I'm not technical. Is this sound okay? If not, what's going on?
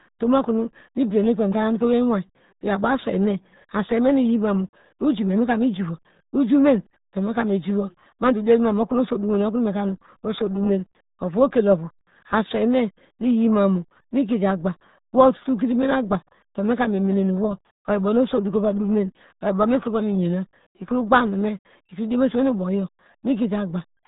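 No. The whole recording, from start to finish, carries RealAudio 14.4 codec damage. This old dial-up-era format squeezes speech very hard and throws away everything above about 3.8 kHz, so the voice sounds muffled, gargly and smeared throughout.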